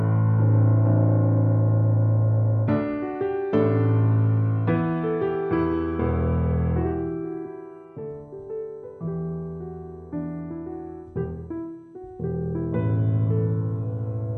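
Nothing goes wrong anywhere in these everyday sounds; there's simply no technical fault to point to.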